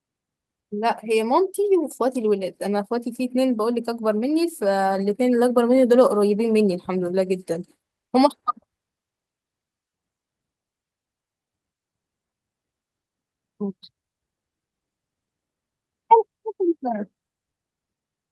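No technical faults can be heard anywhere in the speech signal; it stays continuous and steady throughout.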